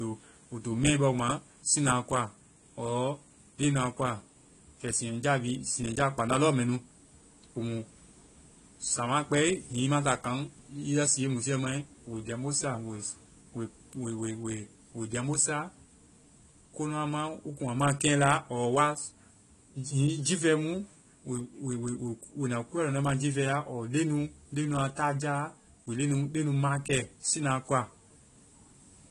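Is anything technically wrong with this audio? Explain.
Yes. AAC compression runs throughout: nothing remains above 12 kHz, so the speech sounds dull and smeared, with a warbling, fizzy texture on sibilants and held sounds. The likely cause is low-bitrate AAC-LC coding, which fits roughly 32 kbps. Lacking bits, the encoder dropped its upper frequency limit and quantised the remaining spectrum coarsely against a hearing model, leaving gaps between bands that shift frame to frame and produce that swirling artefact.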